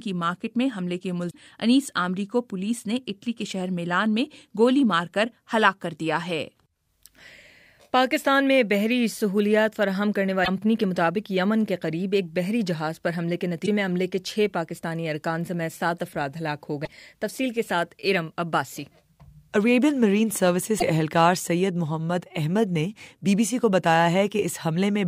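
Damaged data in a compressed stream strikes five times, at 1.27–1.35 s, 10.41–10.48 s, 13.62–13.68 s, 16.81–16.87 s and 20.76–20.83 s. Each time, corrupted bytes reach the decoder, which misreads the affected frames, loses sync and hunts for the next valid header. The result is a brief chirp or squawk of about 55 to 80 ms that cuts abruptly across the sound before clean decoding resumes.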